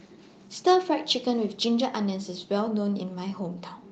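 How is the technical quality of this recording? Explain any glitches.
Nothing in this speech recording stood out as a glitch or technical problem on listening.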